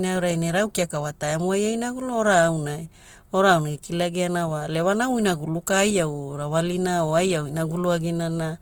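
No technical faults can be heard in the speech. The Opus voice compression, running in full-band CELT mode at what sounds like around 24 kbps, leaves only light coding marks and keeps content reaching up to about 20.1 kHz.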